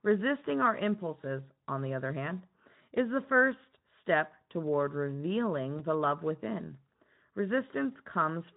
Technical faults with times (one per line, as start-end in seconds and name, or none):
5.78-5.81 VoIP packet loss concealed by the speech codec
7.93-7.98 VoIP packet loss concealed by the speech codec